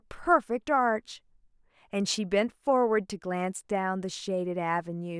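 Nothing technical jumps out in this short bit of speech; there's simply no fault here to point to.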